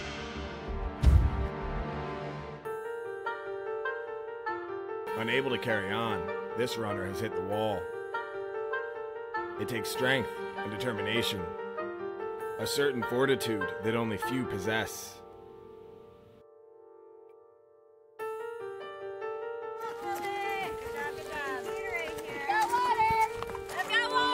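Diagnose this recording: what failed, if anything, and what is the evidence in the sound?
The converter failed: sample clock jitter from about 18.47 s to 20.09 s. In that stretch a faint hiss and roughness rides on the sound, tracking its level and brightness and disappearing in quiet gaps. Timing wander of about 0.7 µs is enough: each sample is taken slightly early or late, and the steeper the waveform, the larger the error. Here that error sits around 50 dB below the signal.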